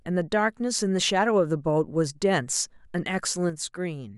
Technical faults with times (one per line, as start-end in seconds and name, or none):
3.50-4.17 one channel drops out